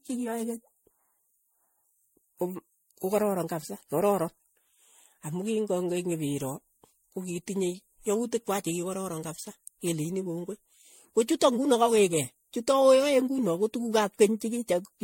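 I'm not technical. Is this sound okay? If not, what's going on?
No. Generation loss runs through the whole recording: the speech sounds swirly, hollow and smeared, with blurred consonant edges and no sparkle at the very top. This is likely from being saved as an MP3 about five times over, each save adding fresh damage.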